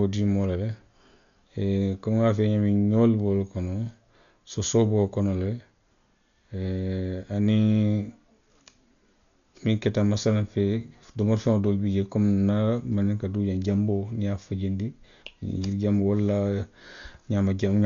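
A speech recording with heavy coding damage throughout. Nothing is heard above about 6.9 kHz, so it sounds dull. A rough, fluttering noise hangs around tonal parts. The likely cause is Dolby Digital compression at a low bitrate, which fits about 48 kbps.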